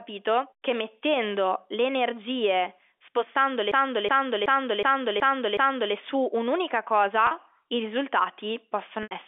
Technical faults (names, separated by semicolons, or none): packet loss with pitch repetition; system hang loop